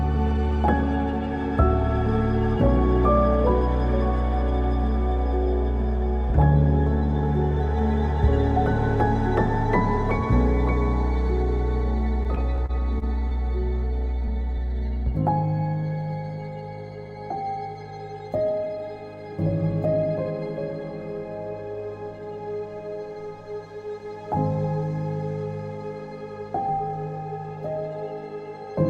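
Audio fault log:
12.23–13.33 s, repeated stalls (stutter): six brief hold-ups, the longest about 30 ms, about 117 ms in all. The jitter buffer kept running dry as packets arrived late, so the last sound was stretched across each wait. Nothing is lost, but the passage drags and stutters.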